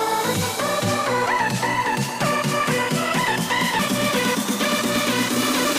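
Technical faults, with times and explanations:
1.26 s, 3.79 s and 5.65 s: damaged data in a compressed stream. Each is a very short glitch where corrupted bytes make the decoder misread a frame and resynchronise.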